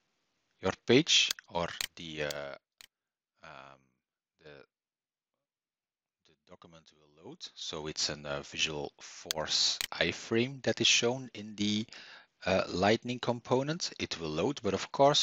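From 2.12 to 2.6 s there's zipper noise: the level drops around 20 dB in unsmoothed steps of about 2 dB, roughly thirty a second, so a fast ticking zips over the sound. It's back from 7.04 to 8.04 s as the level climbs, in finer steps of about 1 dB.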